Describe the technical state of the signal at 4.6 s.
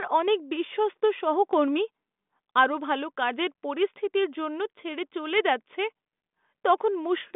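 At 4.6 s the audio is intact with no fault to be heard, the speech coming through a G.726 ADPCM telephone path at 40 kbit/s that passes roughly 200 Hz to 3.6 kHz with at most a faint trace of coding noise.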